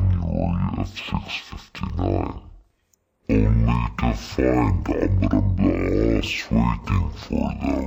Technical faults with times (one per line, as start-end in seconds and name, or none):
0.00-7.86 stereo read as mono